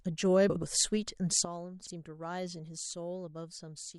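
Speech, with two kinds of fault. Frames out of order: adjacent runs of frames were decoded in swapped order, so from 0.50 to 0.63 s two blocks of about 64 ms play exchanged, and again from 1.84 to 1.91 s with blocks of about 32 ms. Each stretch comes out as a garbled flutter. Sudden gain jump: a gain setting, likely applied without a ramp, drops the speech and background noise together by about 12 dB at 1.45 s, and that lower level holds to the end.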